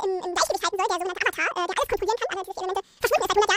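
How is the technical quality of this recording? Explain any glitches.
Poor: the speech runs at twice its normal speed and sits a full octave high for the whole recording. This is audio read two samples at a time (double speed). The reader treated each pair of samples as a single frame, as if the data held two channels or wider samples, so everything plays back in half the time.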